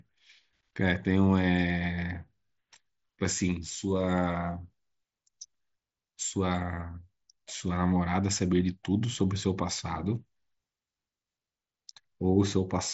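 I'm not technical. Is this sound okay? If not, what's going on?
Yes, nothing here is wrong with the sound.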